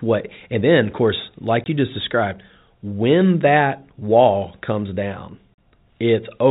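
Speech over a narrowband telephone path, with nothing above 4 kHz. It shows packet loss filled with silence. Hard-edged gaps open from 1.64 to 1.66 s, after "then of course", and from 5.54 to 5.58 s, after "that wall comes down". Their 20 ms and 40 ms lengths fit one and two lost 20 ms packets.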